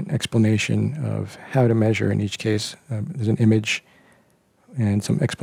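A steady buzz at about 92 Hz runs throughout, from a block size mismatch (truncated): each block's tail is discarded, so the seams repeat at that rate, with playback speed essentially unchanged.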